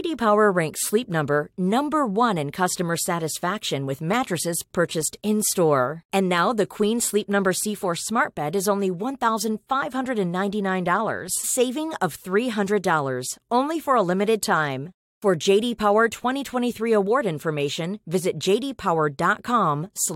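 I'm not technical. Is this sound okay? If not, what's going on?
No, not quite. At about 11.43 seconds there's a quick glitch in the speech, a sign of damaged data in a compressed stream. Part of the file got garbled, so the player stumbled, lost its place for a split second, and picked back up.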